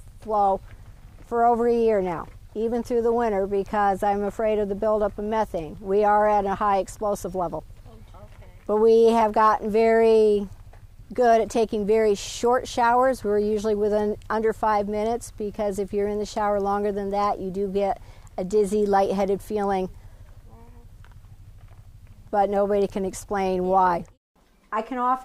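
Nothing stood out on listening to this clip.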